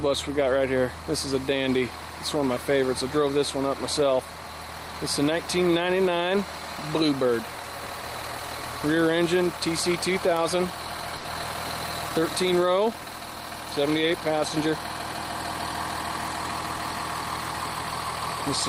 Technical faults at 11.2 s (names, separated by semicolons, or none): short stall from a late packet